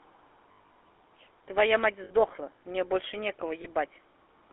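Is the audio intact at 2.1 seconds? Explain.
No. From 2.04 to 2.12 s, lost GSM frames break up the speech. The gap fits three missing 20 ms frames. The decoder fills it by repeating the settings of the last good frame. What you hear is a short, rough, metallic ring instead of the real speech. It is held briefly before the signal resumes.

This sits on top of the GSM full-rate codec, which runs through the whole clip. The codec builds the voice from a vocal-tract model driven by regularly spaced pulses. The damage is plainly audible as a buzzy, gravelly roughness. The band is limited to about 300 Hz to 3.5 kHz, which fits the 13 kbps full-rate codec.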